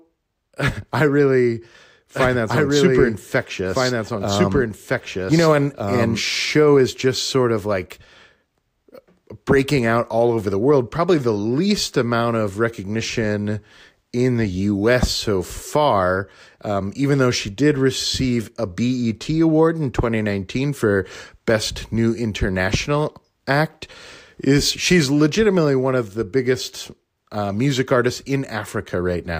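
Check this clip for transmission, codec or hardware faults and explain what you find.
There's one clear fault, a doubled audio track from about 2.15 s to 6.21 s, starting right after "I really" and ending just before "show is just sort". A second full-band copy of the speech runs about a second and a half behind, roughly as loud as the original, so the two versions talk over each other. It cuts in and out abruptly, with no decay or room colour. That's likely a slower second capture path or an out-of-step edit mixing the audio in twice.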